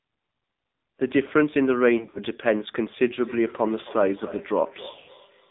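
Throughout, the AMR narrowband mobile codec confines the sound to roughly 200 Hz to 3.7 kHz, so a spectrogram shows a hard ceiling. Its buzzy, synthetic texture fits a low mode near 7.4 kbps.

From 1.98 to 2.19 s, lost AMR speech frames remove about 80 ms in runs of up to 40 ms. Each gap is briefly smeared by reused frames before the gain drops, so the waveform shows short, shallow notches.

From 3.1 s to the end, feedback echo between two devices sends each phrase round again about a third of a second later. The repeats peak about 17 dB below the direct sound and show as faint, thinner copies trailing each burst on the spectrogram.

From 4.92 to 5.10 s, more lost frames take about 120 ms, with a run of 80 ms that is drawn out and then fades. The waveform shows a tapering dip before the level recovers.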